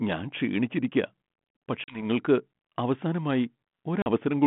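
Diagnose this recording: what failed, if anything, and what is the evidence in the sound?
At the network stage, packet loss on an ADPCM call dropped about 40 ms of audio, roughly a couple of packets, at 1.84 s and again at 4.02 s. Each gap is a hard-edged silence. Because G.726 at 32 kbit/s sends only differences from an adaptive prediction, the receiver's predictor and step size lose sync with the sender's. The sound therefore comes back slightly distorted until about 2.04 s and 4.09 s.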